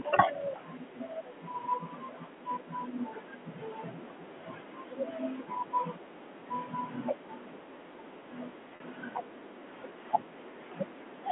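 Packet loss with pitch repetition at 8.76 to 8.80 s: about 40 ms of audio, consistent with two 20 ms packets, was bridged by repeating the last pitch period, giving a briefly held, buzzy tone.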